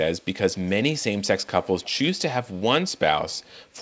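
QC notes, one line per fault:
0.62–0.71, 0.98–1.04, 1.43–1.93, 2.43–2.62 and 3.31–3.58 s, echo leak: a faint delayed copy of the talker trails the original by about 192 ms each time, so it sounds like a ghostly slapback. It's quiet, roughly 25 to 40 dB below the speech, and loudest in the half-second stretch from 1.43 s. The likely cause is a far-end speakerphone whose echo canceller let some of the pickup through and sent it back down the call, with the bandwidth topping out at 8 kHz.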